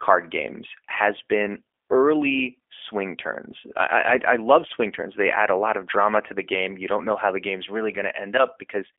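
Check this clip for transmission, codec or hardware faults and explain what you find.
One codec fault runs through the whole recording. Throughout, the speech passes through the G.729 codec: each 10 ms frame is rebuilt from a vocal tract model, a pitch predictor and a few coded pulses at a rate that fits 8 kbit/s. The telephone band holds everything between 300 Hz and 3.4 kHz, so the audio sounds thin and boxy, with a plainly audible rough, synthetic buzz.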